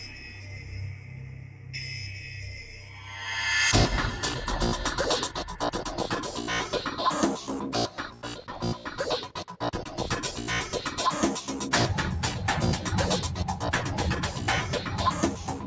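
Throughout the clip, the level pumps and thins by around 10 dB. Sudden onsets mostly punch through while anything held or decaying sinks. This is a noise suppressor applied to music or sounds: a speech-tuned suppressor mistakes steady tones and tails for noise and keeps turning them down.

Three passages show the sound cut by the noise suppressor. From 0.07 to 1.75 s it sags by up to about 7 dB. From 2.01 to 3.1 s it sags by up to about 6 dB. From 7.9 to 8.24 s it sags by up to about 7 dB. In each, sustained content is treated as noise and attenuated more heavily than the rest, so it fades or loses its decay. All of this sits within the call path's band, which stops at 8 kHz.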